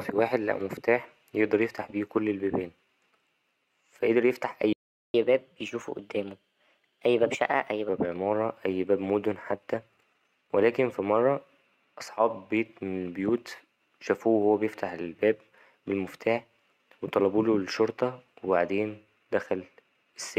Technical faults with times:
4.73-5.14 playback stall
5.14-7.89 catch-up at higher speed

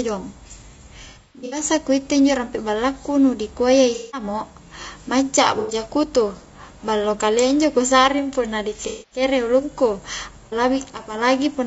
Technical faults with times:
0.00-11.66 low-delay AAC compression
1.04-1.63 AAC frame loss with concealment
3.94-4.24 AAC frame loss with concealment
5.60-5.74 AAC frame loss with concealment
8.87-9.22 AAC frame loss with concealment
10.46-10.55 AAC frame loss with concealment

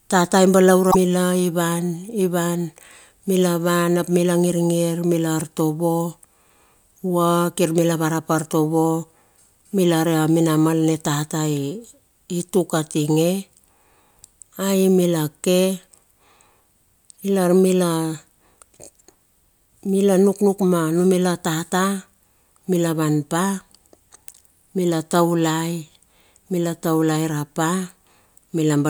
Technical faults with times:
0.88-0.95 damaged data in a compressed stream
24.30-24.35 damaged data in a compressed stream

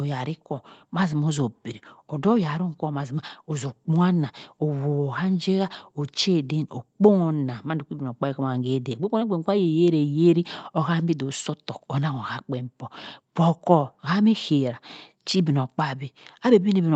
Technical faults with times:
none

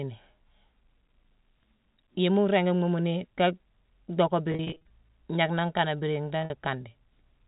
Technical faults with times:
4.52-4.90 packet loss with pitch repetition
6.42-6.50 packet loss with pitch repetition

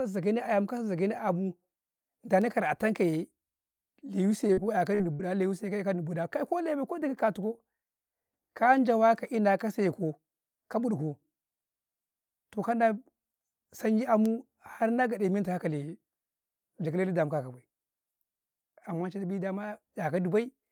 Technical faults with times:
4.47-4.59 short concealed packet loss
4.95-5.01 short concealed packet loss
5.13-5.21 burst of packet loss

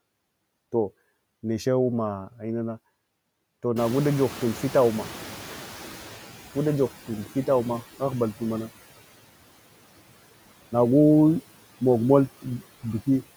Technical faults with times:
0.00-13.36 noise suppressor artifacts
3.76-6.93 noise suppressor catching up

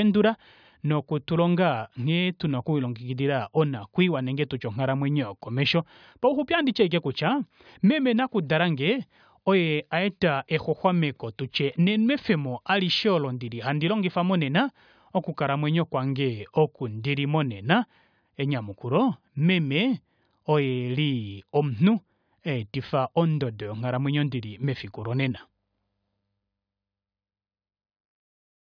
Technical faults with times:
none

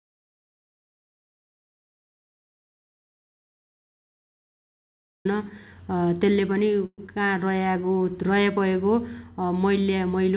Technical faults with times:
0.00-5.25 audio dropout to silence
6.86-7.01 call audio freeze
7.07-7.11 skip ahead
7.51-8.60 jitter buffer slow-down

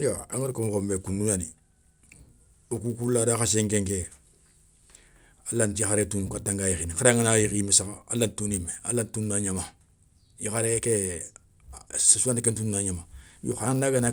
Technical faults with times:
0.00-14.12 resampler restarted on every block

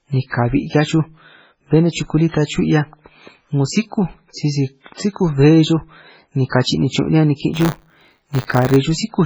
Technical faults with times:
0.00-9.25 MP3 compression
7.53-8.77 buffer tearing

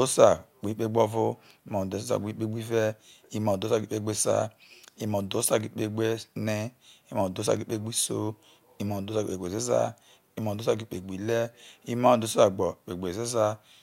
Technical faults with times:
none

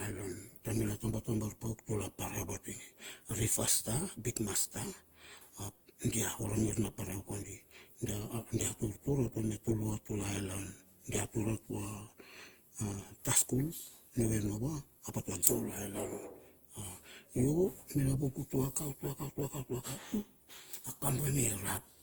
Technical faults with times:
0.00-22.03 generation loss

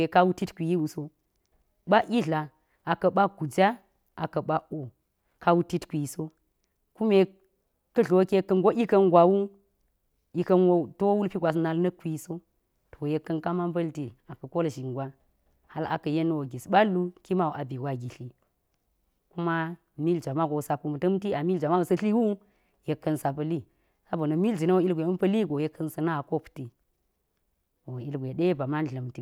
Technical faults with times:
none

